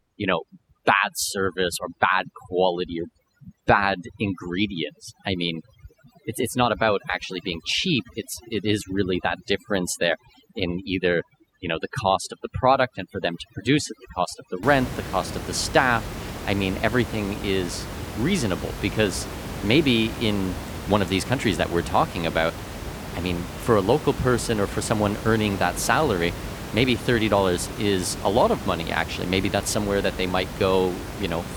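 From the start to about 14.6 s, just before "the cost of the", overdone noise removal gates the frequency bands near the noise estimate, leaving twinkling specks over the room noise.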